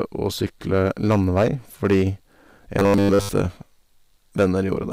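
Speech recording with hard clipping across its whole length: the signal is driven about 7 dB beyond what one stage in the chain can pass, so the loudest peaks are sliced flat. Only a small share of samples, around two percent, hit the ceiling, but each flattened peak sprays harmonics high into the spectrum. The result is a gritty crackle riding on the stronger syllables rather than a continuous fuzz, present from start to finish. Overlapping chunks show up as two brief glitches, at 1.78 s and 3.79 s, exactly 2 s apart. At each join a new block of audio starts before the previous one has finished, so 12 ms of material is played twice. That duplicated sliver is heard as a small click or hiccup, and the 2 s spacing points to fixed 2 s processing or transport chunks whose boundaries are misaligned. From 2.79 s to 3.29 s the speech collapses into robotic sound from repeated short buffers: a flat, metallic buzz pinned at 100 Hz that loosely tracks the speech contour while most of the real audio in that half-second is dropped. 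A 100 Hz buzz matches a 10 ms segment being looped over and over, likely because fresh audio was arriving too slowly and the playback side kept recycling its last short buffer to fill the gap.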